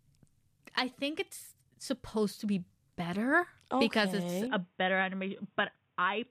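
At 4.47 s the recording input likely switched to a poorer device. From there to the end, the speech loses everything above 3.8 kHz and turns dull and boxy, with no gap at the switch, little change in level, and only a faint new background noise.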